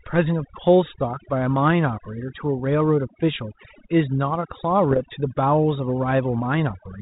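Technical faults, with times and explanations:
Throughout: overdone noise removal. A noise reducer set far too aggressively keeps muting individual frequency bands it mistakes for noise, so the background drops to near silence sprinkled with twinkling specks. Unlike codec hiss, the damage tracks quiet spectral detail, not level.
4.91–5.00 s: bit errors on an ADPCM link. Corrupted bits at a rate of roughly 0.4 percent throw the decoder's step size and predictor off, so each error rings on briefly as pops and a rough burst with jumpy level. The lightly coded G.726 path around it shows this is transmission damage, not steady coding noise.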